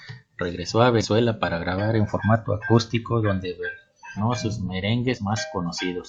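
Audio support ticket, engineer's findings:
Compressed frames skipped: the decoder dropped missing or damaged frames of about 46.4 ms each. Speech jumps ahead. At 1.00–1.04 s, about 150 ms is lost, just before "para grabar en formato". At 4.16–4.19 s, about 300 ms is lost. At 5.13–5.18 s, about 100 ms is lost.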